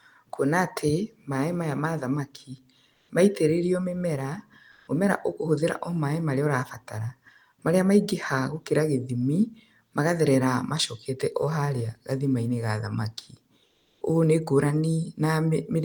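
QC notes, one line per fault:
2.93–3.09 s, 4.71–4.87 s, 13.65–14.01 s: comfort noise in place of the background. The real room tone drops out for 160, 160 and 360 ms, replaced by flat synthetic hiss, likely from Opus DTX, and it steps about 1 dB up, 4 dB up, then 4 dB down.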